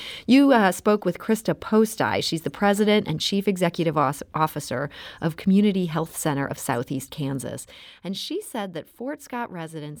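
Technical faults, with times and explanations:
7.33–7.86 s, zipper noise: the level drops roughly 10 dB in unsmoothed steps, around 40 a second, and each jump clicks, so the speech carries a zipping tick. The waveform envelope descends like a staircase, and a spectrogram shows faint broadband vertical lines at each step.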